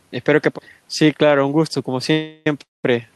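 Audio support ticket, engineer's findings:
Speech halts twice, 2.11–2.47 s and 2.63–2.85 s, each time held as a fading buzz, the second dying to near-silence. Resumes where it stopped; nothing lost, about 0.35 s and 0.21 s of delay added. Call audio freeze, likely jitter buffer underrun from late packets.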